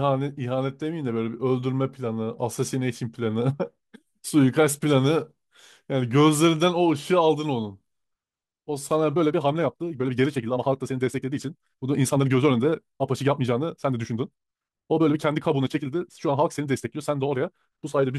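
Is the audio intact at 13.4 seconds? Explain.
No. A time-stretched section runs from 9.11 s to the end, covering 13.4 s. The speech there plays about 1.67 times faster while keeping its pitch, likely because software squeezed it to fit a length by dropping short pieces, so it sounds rushed.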